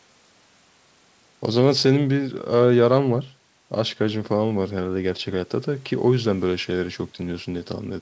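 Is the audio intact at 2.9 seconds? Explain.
Yes, the speech at 2.9 seconds is intact, with no fault at that moment.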